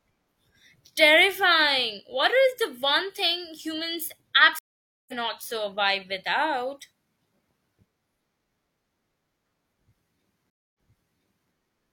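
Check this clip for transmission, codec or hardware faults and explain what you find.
Two stream reconnects break this speech clip. At 4.59 to 5.14 s, after "the one thing humans", the audio goes silent for about half a second and resumes about half a second further on, at "survive without". At 10.50 to 11.51 s a 246 ms silence is followed by a restart 768 ms earlier, so a stretch repeats. Each time the connection dropped and a fresh decoder picked up mid-stream, muting or fading in its first moments. Unlike a plain dropout, the audio does not return where it left off; the timeline jumps.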